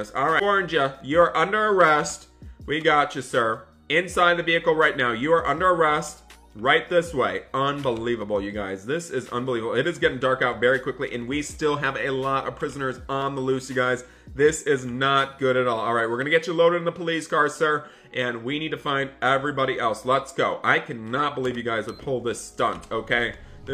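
Near the start, from 0.38 to 0.42 s, the audio is hit by damaged data in a compressed stream. Corrupted bytes make the decoder misread those frames until it finds the next frame header, leaving a 44 ms disturbance tied to the codec's frame structure rather than to the recorded sound.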